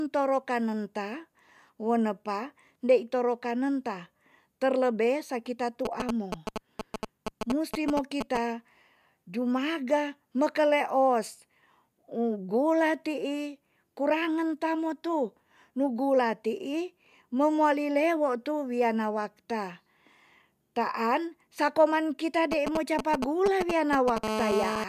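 From 5.85 to 8.37 s, right after "kanen ta terlebe sakita", and again from 22.52 to 24.18 s, after "taan sa koman kita", GSM signalling bursts break in at roughly the level of the speech. A nearby 2G phone is exchanging brief control transmissions, and the audio circuitry rectifies each radio burst into sound. The result is a galloping dit-dit-dit of short buzzes at 217 Hz. On a waveform they appear as clustered rectangular blocks. A spectrogram shows short vertical stacks of harmonics spaced at 217 Hz.

At 24.24 s, just after the second run of bursts ends, the phone settles into a call, and continuous GSM phone buzz follows until 24.84 s, about 2 dB below the speech. The handset now transmits 217 times a second without pause, and the rectified pulses form a hard, raspy buzz that is unrelated to the speech. The waveform shows a dense, regular pulse train. The spectrogram shows unbroken horizontal lines at 217 Hz and its many multiples, extending well into the kHz range.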